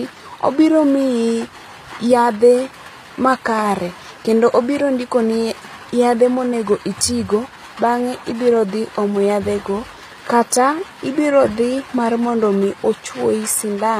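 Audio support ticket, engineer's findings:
Gritty, lispy sibilance throughout; treble sounds synthetic. Spectrogram: pasted-looking upper bands, hard cutoff at 15.4 kHz. Likely HE-AAC compression, band-replicated highs, fits roughly 24 kbps.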